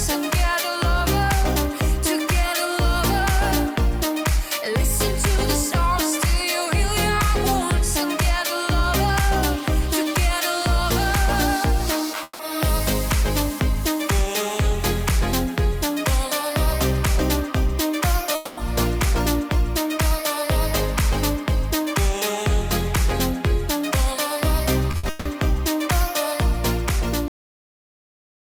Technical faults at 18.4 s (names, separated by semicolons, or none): long network dropout